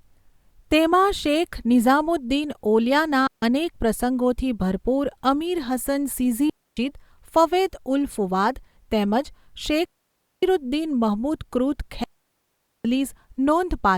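At 3.27, 6.50, 9.85 and 12.04 s the speech falls into digital wireless dropouts lasting 0.15, 0.27, 0.58 and 0.81 s: the receiver loses too much data and mutes with a brief fade, leaving clean near-silence with no noise burst, unlike an analogue dropout's hiss.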